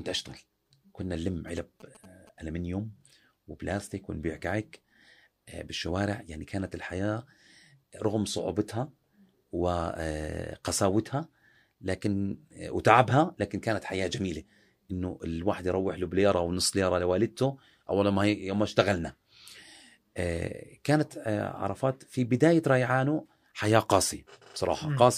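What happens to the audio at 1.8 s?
A nearby 2G phone is signalling to its network, and the audio circuit rectifies its radio bursts. These GSM signalling bursts run from 1.48 to 2.29 s and are heard as a galloping dit-dit-dit of short 217 Hz buzzes, well below the speech.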